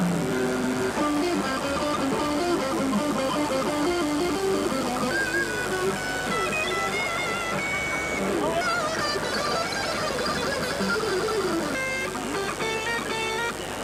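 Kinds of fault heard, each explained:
Mains buzz: Sharp switching spikes from the 50 Hz supply leak into the audio path, the kind a dimmer, rectifier or missing shield lets in, producing a steady, raspy buzz that runs under the whole clip at roughly 15 dB below the wanted sound. On a spectrogram it shows as a comb of evenly spaced horizontal lines at multiples of 50 Hz reaching into the kilohertz range; the waveform carries small repeating spikes at 100 per second.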